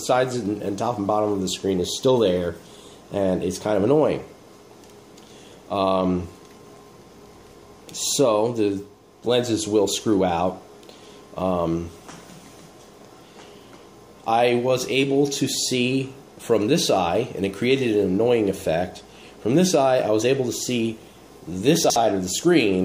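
At 21.84 s the audio scrambles briefly until 21.96 s. This is chunks out of order. One 60 ms chunk arrived a chunk late and plays after its neighbour. Nothing is missing. The swapped order leaves three hard joins, heard as a jumbled blip.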